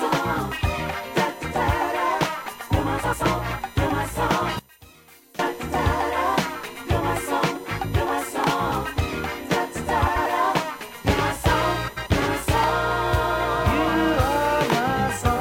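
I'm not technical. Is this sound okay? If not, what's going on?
No. USB whine runs through the whole recording: a steady, fixed-pitch tone at 1 kHz. Electrical noise from a USB connection's regular power draw, repeating every thousandth of a second, has leaked into the audio through the power or ground wiring.

Frames out of order occurs at 3.03 to 3.23 s, 10.06 to 10.27 s and 11.87 to 12.08 s. Two neighbouring chunks of about 93 ms each were played in swapped order, giving a short garbled flutter.

One channel inverted is the likely cause from 4.59 to 5.39 s, where the sound suddenly drops to a faint trace. One side's signal was flipped upside down, so when both sides are combined, the shared, centred material cancels out.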